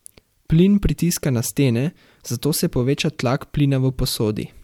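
Listening through the speech, nothing stood out as a technical fault at any point.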